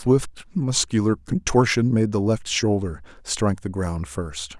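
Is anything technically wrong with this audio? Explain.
No, the speech signal shows no technical faults anywhere in the recording.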